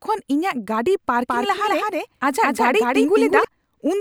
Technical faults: doubled audio track

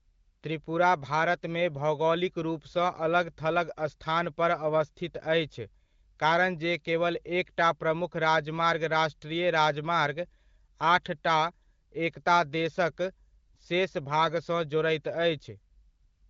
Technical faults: none

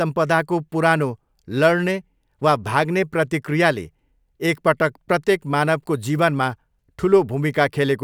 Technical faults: none

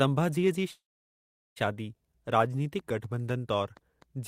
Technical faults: call audio freeze

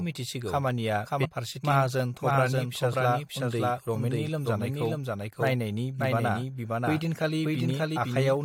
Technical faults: doubled audio track; damaged data in a compressed stream

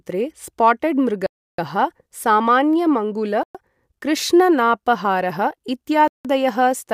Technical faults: Bluetooth stall

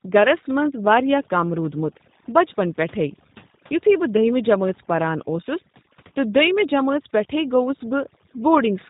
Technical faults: overdone noise removal; G.729 codec

